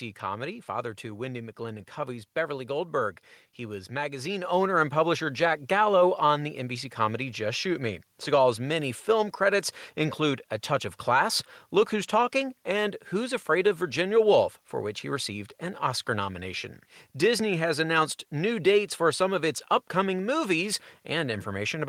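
At 4.44 s, between "was magazine" and "owner and publisher", the microphone volume stepped up by about 6 dB, so voice and background jump louder together.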